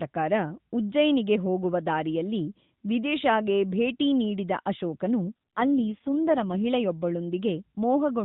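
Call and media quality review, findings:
AMR rate drop, 5.22 to 6.58 s: speech turns rougher, buzzier and more synthetic, with the same band and no gap. The sound fits the network lowering the AMR mode from 12.2 to 4.75 kbps under a weak radio link. Fewer bits reach the vocal-tract model, so quality recovers when the rate steps back up. The AMR-NB path is audible throughout, with nothing above 4 kHz and light codec colouring at the higher rate.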